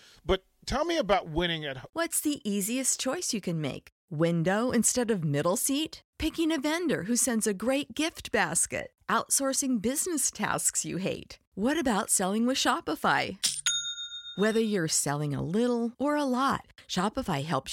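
No technical faults are audible anywhere in this recording.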